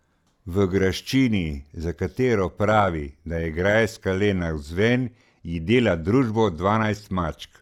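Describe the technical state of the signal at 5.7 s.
At 5.7 s the speech sits inside a channel delay (comb filtering) stretch running from 4.32 s to the end. One channel lags by roughly a sample when summed to mono, putting the first notch near 20 kHz. This gives a gentle top-end dulling, unlike the hollow, repeating notches of longer delays.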